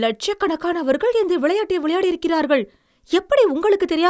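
No technical faults are audible anywhere in the speech recording.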